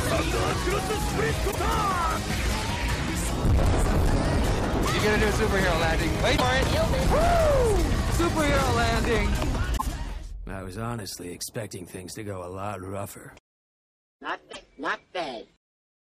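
Hard clipping runs through the whole clip. The signal is driven about 12 dB past what a stage could pass, and around 7 percent of samples hit the ceiling. The flattened peaks add high harmonics, giving a harsh fuzz on every loud passage.

At 1.50, 6.36, 9.76 and 14.51 s there are abrupt skips, each followed by roughly 57 ms of disruption, a chirp, burst of noise or short hole. That is about two 26.1 ms frames. This likely comes from a broken MP3 bit reservoir: frames were dropped, and the following frames decoded against another frame's data.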